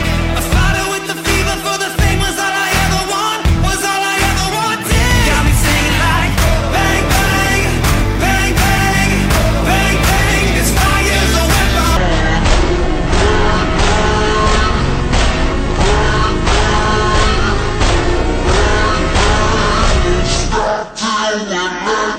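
From 11.97 s to the end of the clip, the audio drops abruptly into a deep, sluggish register, moving at just over half its proper pace (0.546×) and sitting around ten semitones lower than before. This is a section at the wrong speed, with pitch and tempo falling together, which is most likely the result of that stretch being played back or resampled against the wrong clock rate, slowing everything in lockstep.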